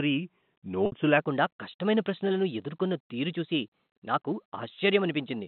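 At 0.86 s there's a short dropout running to 0.92 s, a case of packet loss with pitch repetition. About 60 ms of audio went missing, which fits three 20 ms packets, and the receiver filled the hole by looping the last pitch period and fading it down. You hear a brief held, buzzy tone that sinks toward silence before the speech cross-fades back in, all squeezed into that narrow telephone band the G.711 line gives you.

From 1.2 s right to the end, the section is at the wrong speed. It runs 1.12 times too fast, so everything after that point is both quicker and pitched up by roughly two semitones, and the switch is abrupt rather than gradual. The likely cause is that this stretch was played or edited against the wrong clock, leaving the voice sounding slightly chipmunky and rushed compared with the opening second.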